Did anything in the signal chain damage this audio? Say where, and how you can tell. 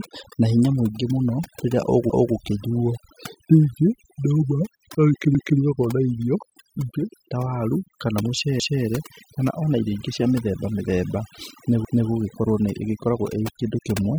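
Yes. Overdone noise removal runs through the whole speech clip and belongs to the call-processing stage. The background drops and breaks up into twinkling specks. A noise suppressor set too aggressively is pulling individual frequency bands far down or out whenever they sit close to its noise estimate. Quieter components of the voice fall under that threshold and are removed along with the noise.

Overlapping chunks appear at 2.10, 5.35, 8.60 and 11.85 s. Each join replays about 250 ms of audio, heard as a stutter or click. The join at 5.35 s comes just before "na irio", and the one at 8.60 s comes right after "ta waru kana". The regular spacing fits audio handled in 3-second blocks at the buffering or streaming stage. Each new block starts a quarter second before the previous one finished, so that slice plays twice.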